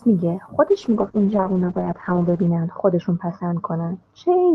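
Speech that, from 0.68 s to the end, turns rough and watery and loses its top end, the highest content falling from about 12 kHz to 8 kHz for 1.8 s at its worst. This is a call bitrate drop: the Opus encoder was starved of bits, consistent with a fall from around 32 to 8 kbps, coding coarsely and narrowing bandwidth.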